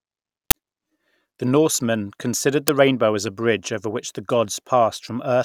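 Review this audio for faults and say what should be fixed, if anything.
Two output buffers were sent to playback before any audio had been written into them. The uninitialised buffer faults are at 0.51 s and 2.68 s, the second just before "the rainbow as a". Leftover memory contents were played out as samples, so each one is a sudden, loud crack or burst of digital noise cutting into the speech. The first lasts about 11 ms, which fits a 512-sample buffer. The second lasts under 3 ms, which fits a 128-sample buffer. To prevent this, zero-fill every buffer when it is allocated, or output silence whenever a buffer is not ready in time.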